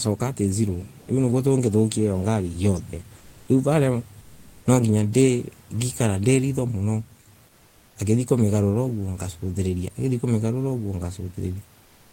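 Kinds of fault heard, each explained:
Comfort noise in place of the background: in the pauses at 3.17–3.47 s, 4.21–4.65 s, 7.47–7.95 s (between "ni ritho muno" and "ngithie kumigarura uguo ngasuthiriria") and 11.83–12.11 s, the room's natural background gives way to a flat, textureless hiss about 3 to 7 dB quieter, lasting 280 to 480 ms. The likely cause is Opus discontinuous transmission: the sender stops during silence and the receiver fills the gap with synthetic noise shaped like the background.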